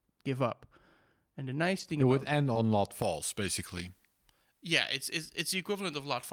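Lost packets rebuilt from error correction occur in this speech clip at 1.43, 1.51, 1.79, 1.83, 1.87, 1.99, 2.33 and 2.55 s, each about 20 ms long. The ones at 1.87 and 1.99 s fall just before "it would", and the one at 2.33 s just after it. In each case the following packet carried a low-bitrate backup copy, and the decoder played that instead of leaving a gap. Those brief frames sound rougher and noisier than their surroundings.

A short concealed packet loss spans 2.53 to 2.57 s. About 20 ms of audio never arrived in time, and the receiver bridged roughly 18 ms of it by extending the preceding sound, either continuing its pitch or shaping noise, before blending back into the real signal. This leaves a small smear or wobble, overlapping the rebuilt frame at 2.55 s.

Pre-emphasis left on runs from 3.02 s to the end. A J.17 treble boost was applied without the matching de-emphasis, so high frequencies sit about 11 dB above 1 kHz at 10 kHz. 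From that point the sound turns thin, bright and sibilant.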